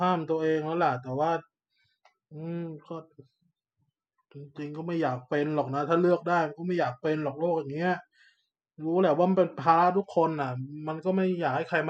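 No technical faults are audible.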